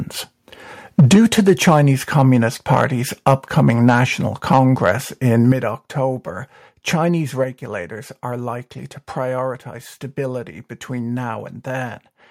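From 0.99 to 1.8 s the loudest speech turns harsh and crackly. The same edge returns at 2.18 to 2.22, 2.72 to 2.84, 3.27 to 3.33, 3.7 to 3.94, 4.53 to 4.59, 4.85 to 4.91 and 5.5 to 5.52 s. This is microphone overload, likely from an input set too high. Peaks push about 1 to 6 dB past the converter's limit. Their tops are sliced flat. The first stretch is worst, at about 6 dB over. Only a small share of the waveform is cut each time.

At 1.00 s the whole level drops suddenly by about 4 dB. Speech and background fall together. This is the microphone volume stepped down, likely by call software reacting to the overload. The first step lands just as the long distorted stretch begins. A second, larger drop of about 7 dB comes at 5.52 s, right after the last clipped peak. A third step of about 4 dB follows at 7.44 s. Each one is abrupt, not a gradual fade.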